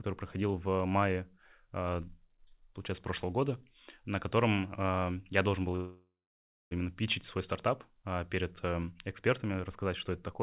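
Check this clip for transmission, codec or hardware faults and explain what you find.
Two faults appear, over audio with nothing above 4 kHz, which fits a G.711 mu-law call path.

Pre-emphasis left on, 1.51 to 8.69 s: the treble boost applied before transmission was never undone, matching a 75 µs FM curve, lifting highs by about 14 dB at 10 kHz relative to 1 kHz. The sound turns thin, bright and sibilant.

Call audio freeze, 5.76 to 6.73 s: the last sound is stretched into a fading buzz or hiss, about 950 ms in all, ending in roughly 600 ms of silence. The likely cause is delayed packets draining the jitter buffer. Playback then resumes where it stopped, adding a 950 ms gap with nothing lost.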